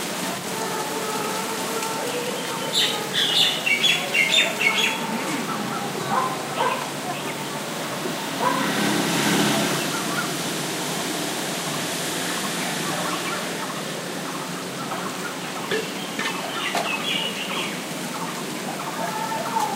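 No technical faults can be heard anywhere in the recording. The sounds come through without any interruption, glitch or added disturbance at any point.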